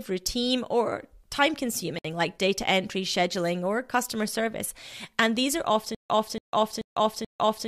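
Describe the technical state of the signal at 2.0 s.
A gap at a join of encoded pieces spans 1.99 to 2.05 s: a 59.5 ms gap with smeared edges, left by untrimmed encoder delay and padding.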